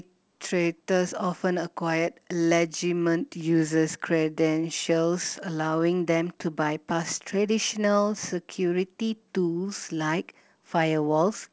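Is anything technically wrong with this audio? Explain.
No, the speech shows no technical fault, and its content stopping at 8 kHz simply reflects the wideband call path it travelled through, consistent with a codec such as G.722.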